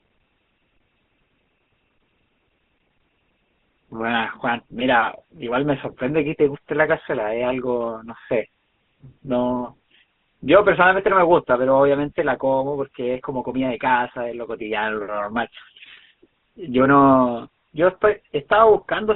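From start to finish the speech sits behind a GSM full-rate codec, and it's plainly audible. The band is squeezed to roughly 200 Hz up to 3.5 kHz, so there's no air on top and little low end. The codec rebuilds speech from a vocal-tract model fed by a sparse, regular pulse train, and that leaves a buzzy, gravelly grain on everything, which fits the old 13 kbps phone-network setting.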